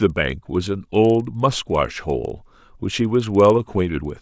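Speech runs throughout with a faint ticking at 20 Hz, a tick every 50 ms, heard only under the voice. That fits a resampler restarted on every block: each 50 ms block was converted alone, likely down to 16 kHz, leaving a small error at every block edge.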